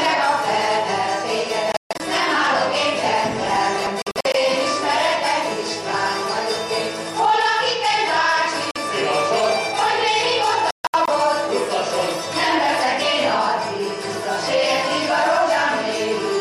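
At 1.72–2.01 s, 4.02–4.35 s, 8.71–8.78 s and 10.71–11.09 s the sound cuts to silence with abrupt edges and resumes further along, as though it kept playing underneath. This is the pattern of a Bluetooth dropout, likely caused by packets reaching the headphones too late and being discarded. The first, second and fourth are clusters of short gaps, each losing about 160–230 ms of sound in total. The third is a single gap of about 46 ms.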